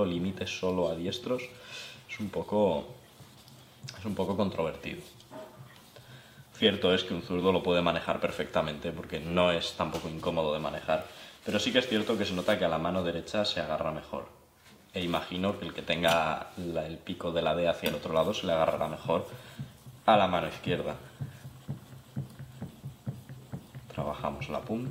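No technical faults can be heard anywhere in the audio. Nothing in the sound breaks, drops out or changes in a way that points to a problem in how it was captured or carried.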